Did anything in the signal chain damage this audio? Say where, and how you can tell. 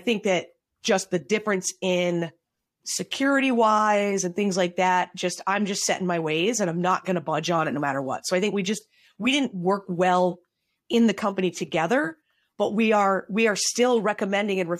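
No, nothing in this speech recording stood out on listening as damage from any stage of the signal chain.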